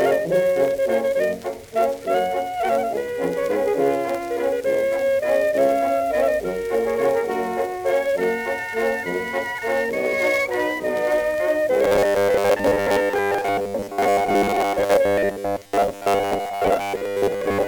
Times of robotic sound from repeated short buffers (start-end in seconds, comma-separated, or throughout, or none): 11.84-17.67